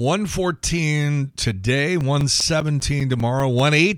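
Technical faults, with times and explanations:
2.01–3.60 s, CD scratch ticks: nine short ticks at a steady rate of about six per second, each lasting no more than about 10 ms. A surface scratch corrupts more data than error correction can repair on each rotation, so the player briefly interpolates or mutes the speech.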